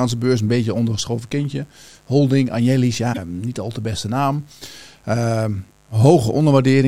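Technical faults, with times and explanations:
Throughout: mains buzz, a steady raspy buzz about 35 dB below the speech, built from sharp switching spikes twice per 50 Hz cycle whose harmonics extend into the kilohertz range.
3.12–3.18 s: broken MP3 bit reservoir, a short jump ahead just before "niet al te beste", likely from frames cut out around 26 ms each, leaving the next frame decoding another frame's bytes.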